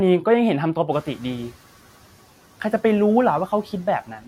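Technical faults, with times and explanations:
0.92–1.51 s, noise suppressor catching up: The suppressor's noise estimate fell behind when the room noise jumped by about 18 dB around 1 s. For the next 590 ms the louder background passes with too little reduction, a sudden rise of noise behind the speech. As the estimate catches up, the suppressor takes about 7 dB off and the noise sinks, finally settling about 23 dB below the speech.
4.07–4.27 s, speech cut by the noise suppressor: At the very end of the clip the suppressor mistook part of the speech for background and turned it down along with the noise, by as much as about 10 dB. Roughly a tenth of a second of sound is affected, so the affected speech comes across faint and swallowed rather than finishing cleanly.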